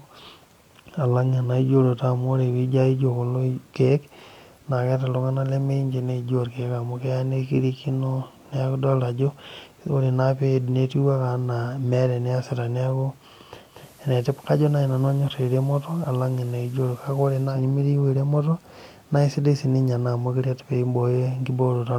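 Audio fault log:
13.61–17.66 s, digital radio blending to analogue: the receiver loses its digital stream and cross-fades over about 0.26 s to the FM broadcast, and later back. Hiss rises to roughly 30 dB below the speech, with no level change.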